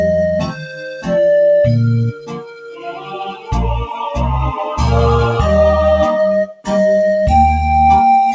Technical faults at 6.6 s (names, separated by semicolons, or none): noise suppressor applied to music or sounds; sound cut by the noise suppressor